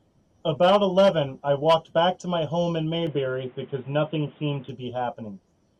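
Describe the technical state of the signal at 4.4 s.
At 4.4 s the speech sounds dull and boxy, with nothing above 3.8 kHz, a new layer of background noise sitting about 35 dB under the signal, and a level shift of around 5 dB. This state runs from 3.07 s to 4.69 s and sets in with no gap. The likely cause is an input switched to a poorer device: the recording moved to a narrower-band microphone or headset profile with its own tone, level and noise floor.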